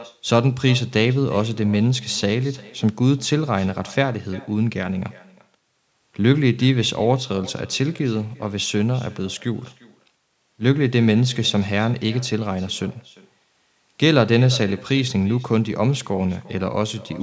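From start to finish the speech carries an echo with no canceller. The far end's loudspeaker feeds its microphone and nothing removes it, so each phrase returns roughly 0.4 s later as a faint, thin copy about 23 dB below the direct sound.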